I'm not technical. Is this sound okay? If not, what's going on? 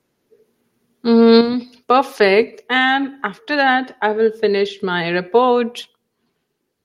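No. At 1.41 s the speech and background both suddenly get quieter: a microphone volume stepped down, likely the call software lowering the input level.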